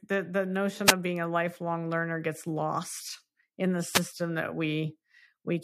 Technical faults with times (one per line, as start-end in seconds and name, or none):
0.85-0.93 wireless microphone noise hit
3.91-4.02 wireless microphone noise hit